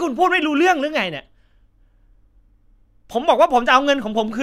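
No technical faults occur at any point in the recording.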